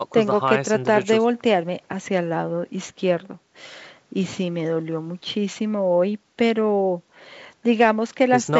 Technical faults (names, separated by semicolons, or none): none